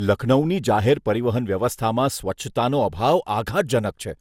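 Throughout the speech, the sound is swirly, smeared and hollow, and attacks blur. Nothing reaches above 17.3 kHz. This is generation loss, likely from about ten lossy passes, fitting MP2 at 128 kbit/s. Each pass stacked fresh noise.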